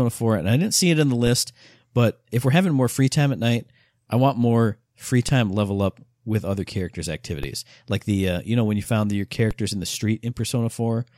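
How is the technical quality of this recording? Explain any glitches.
The recording has four DC step faults. At 1.27, 5.29, 7.43 and 9.51 s, the waveform's zero line abruptly jumps by about -17 to -16 dBFS, then bleeds away through a roughly 20 Hz high-pass. Each jump lands as a low thump under the speech.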